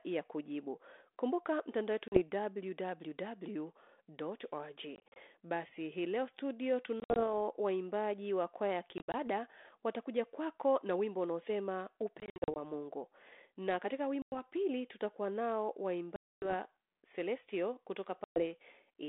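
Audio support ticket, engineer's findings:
Packet loss on an ADPCM call: hard-edged dropouts at 2.08, 4.96, 7.0 (after "hii leo studio"), 8.98, 12.2, 14.22, 16.16 and 18.24 s, each 40 to 260 ms lost, several scattered. On return, speech slightly distorted as the decoder's predictor and step size resync. Link sounds like 32 kbit/s G.726, band near 250 Hz to 3.6 kHz.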